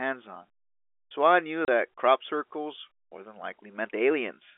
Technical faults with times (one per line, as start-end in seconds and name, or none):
1.65-1.68 packet loss filled with silence